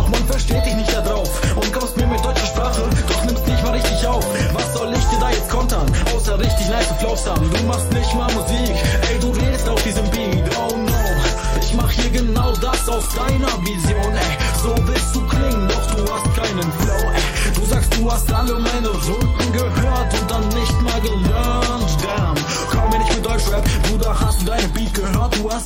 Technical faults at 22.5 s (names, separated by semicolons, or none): none